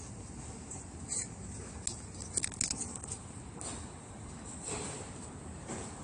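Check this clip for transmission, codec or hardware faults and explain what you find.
There's one fault, and it runs through the whole clip: AAC compression damage. Nothing comes through above 10.1 kHz, so the top end is simply gone, and what's left sounds dull and smeared, with a fizzy, warbling texture on sustained parts. That's the signature of a frequency-domain codec, likely AAC-LC, starved of bits. It drops the cut-off and leaves gaps in the spectrum to save data, which fits a low bitrate somewhere around 32 kbps.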